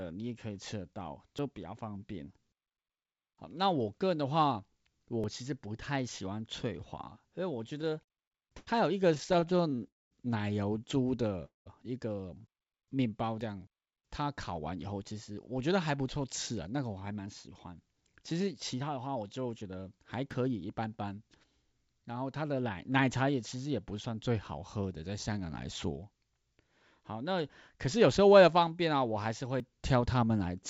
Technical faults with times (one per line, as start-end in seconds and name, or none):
1.39 dropped buffer (overrun)
5.24 dropped buffer (overrun)
7.82-8.69 repeated stalls (stutter)
9.15-9.80 repeated stalls (stutter)
9.88-10.13 call audio freeze
11.45-11.68 call audio freeze
13.41 dropped buffer (overrun)
14.60-19.77 jitter buffer speed-up
20.31 dropped buffer (overrun)
23.52 dropped buffer (overrun)
29.60 dropped buffer (overrun)